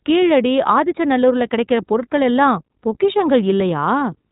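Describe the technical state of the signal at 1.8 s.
At 1.8 s the speech carries iLBC codec damage, present across the whole clip rather than at that moment alone. Nothing above 3.8 kHz survives, and each short block of excitation, consistent with 20 ms frames at around 15.2 kbps, is coded without reference to the previous one, which leaves a plainly audible rough, slightly synthetic grain. A simple telephone-band filter would dull the speech without adding that buzzy, frame-by-frame roughness.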